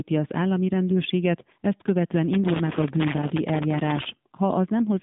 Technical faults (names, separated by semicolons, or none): AMR narrowband mobile codec; loose connector crackle